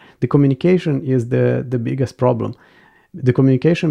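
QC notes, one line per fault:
No faults heard in this speech recording.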